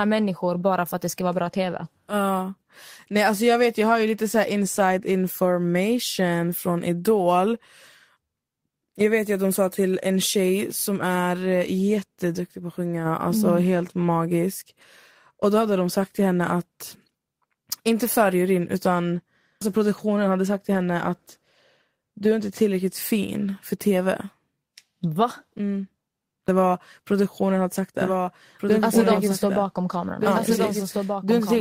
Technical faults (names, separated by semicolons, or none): lost packet rebuilt from error correction; doubled audio track